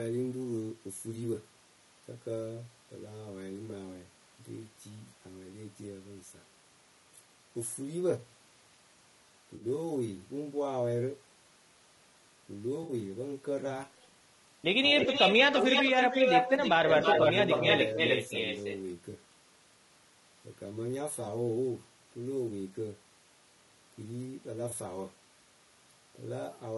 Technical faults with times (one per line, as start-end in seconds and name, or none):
0.00-26.78 low-delay AAC compression
9.55-9.65 AAC frame loss with concealment
12.83-12.93 AAC frame loss with concealment
14.93-15.13 speech suppressed in double talk
15.00-18.80 echo leak
16.79-16.89 speech suppressed in double talk
19.11-19.14 AAC frame loss with concealment
24.69-24.73 AAC frame loss with concealment